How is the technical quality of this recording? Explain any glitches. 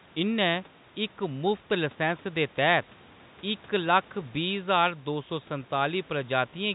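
No glitches or technical faults can be heard here.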